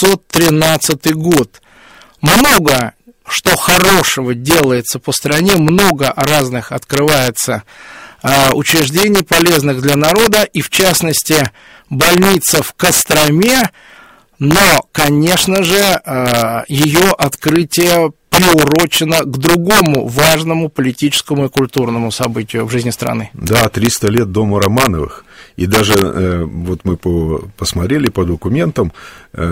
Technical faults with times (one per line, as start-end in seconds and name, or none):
0.00-29.52 integer overflow